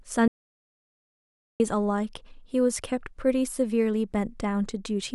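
A speech recording with an audio dropout to silence from 0.28 s to 1.60 s, so about 1.32 s of the talker is simply missing. The signal stops abruptly mid-flow and resumes just as suddenly, and the gap is silent with no room tone or hiss at all. That rules out a natural pause or a noise gate closing, both of which leave some background or a fade. The likely cause is a momentary loss of the input feed while recording continued.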